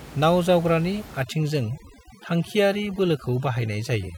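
From about 1.23 s to the end of the clip, you get classic overdone noise removal. The noise reduction is set far too hard, so any frequency band sitting close to what it thinks is noise gets pushed way down or switched off. The quieter parts of the speech get taken out along with it. The background drops and breaks up into little twinkling specks. Underneath, the room noise sits about 18 dB below the speech.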